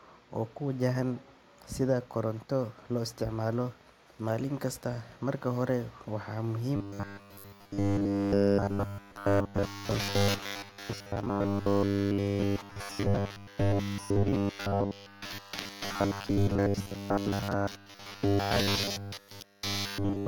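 Speech that, from 6.76 s to the end of the clip, takes on a robotic sound from repeated short buffers: the voice becomes a rigid, metallic buzz fixed at 100 Hz that only loosely tracks the speech. The likely cause is audio reaching the output too slowly, so playback keeps looping a short buffer while fresh audio is dropped. A 100 Hz buzz fits a loop of about 10 ms, and roughly two thirds or more of the audio in this stretch appears to be such repeats.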